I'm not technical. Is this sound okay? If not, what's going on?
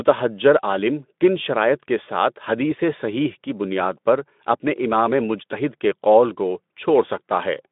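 Yes, nothing stood out as a problem when listening to this speech clip.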